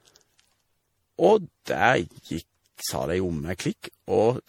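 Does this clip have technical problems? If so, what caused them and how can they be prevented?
Yes. Generation loss runs throughout: swirly, hollow, smeared speech with blurred attacks, likely from about seven rounds of MP3 re-encoding at a rate that fits 64 kbit/s. Prevent it by editing from a lossless master and encoding only once, at the end.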